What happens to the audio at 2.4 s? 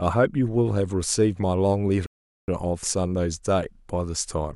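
A rebuffering stall runs from 2.06 to 2.48 s, so at 2.4 s the speech has dropped to silence. The player exhausted its downloaded audio and paused until more arrived, adding 417 ms, then resumes exactly where it stopped, with nothing lost.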